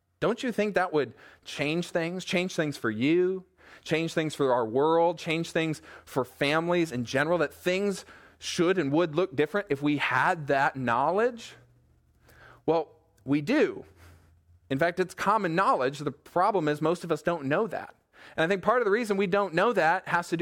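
No dropouts, clicks, distortion or other faults can be heard anywhere in the recording.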